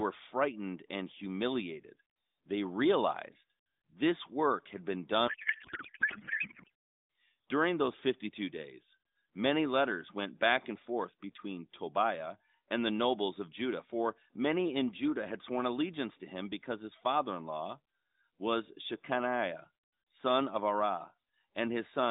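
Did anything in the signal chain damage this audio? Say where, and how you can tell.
Yes, at the codec stage, where there is a codec payload misread. From 5.28 to 6.70 s, right after "this work had been", the speech turns to garbled, warbling noise that barely tracks it. This points to octet-aligned AMR frames being unpacked as bandwidth-efficient, so every parameter lands in the wrong field. The narrowband AMR sound either side of it is the usual band-limited line.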